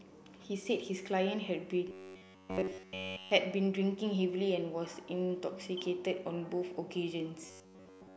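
From 1.89 to 3.31 s, and again from 7.46 s to the end, the speech turns into robotic sound from repeated short buffers: a rigid metallic buzz at 94.1 Hz, likely caused by a roughly 10.6 ms chunk being looped while fresh audio was skipped. The first stretch is completely taken over, and the second is mostly taken over. Unlike a simple stutter, the fixed pitch stays locked while the speech contour still roughly shows through.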